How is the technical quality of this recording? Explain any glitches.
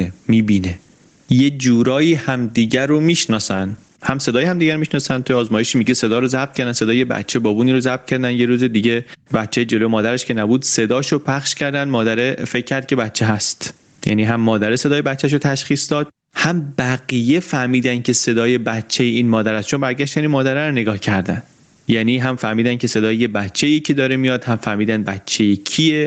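The recording has one persistent fault, gain pumping, running through the whole speech clip, heard over audio band-limited to about 8 kHz in the manner of a low-bitrate Opus call.

Gain pumping: the level breathes throughout, a swing of around 15 dB. The likely cause is input gain set far too high, so a fast limiter or compressor clamps down on each peak and releases in the gaps. Loud and quiet passages end up pressed close together, giving a squashed, pumping sound.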